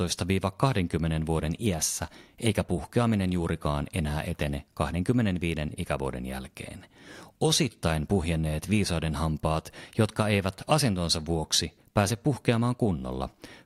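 No technical faults can be heard anywhere in this speech recording. Nothing in the sound calls for comment from the first moment to the last.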